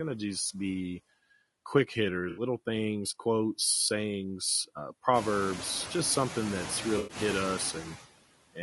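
This speech clip carries noise suppressor artifacts throughout. The background is pulled down by about 18 dB between phrases and returns under the speech. That pumping follows the speech itself, which separates it from the room noise, a genuine part of the recording that steps up by about 20 dB near 5 s and then sits about 11 dB below the speech. The speech is also plainly rough and grainy throughout, with noise filling the gaps between harmonics. This is likely low-delay AAC compression (AAC-ELD) at a low rate, fitting roughly 32 kbps. Because it persists rather than arriving in bursts, it differs from packet damage. Two bursts of AAC frame loss with concealment also stand out. The first, from 2.29 to 2.43 s, falls between "just be quick" and "things quotes sayings uh". The second runs from 6.97 to 7.17 s, right after "proverbs just something that's". In each, the decoder patches over the gap by extrapolating from the last good spectrum instead of going silent, so these are brief altered patches rather than dropouts. 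Their 80 ms and 120 ms lengths fit four and six lost frames.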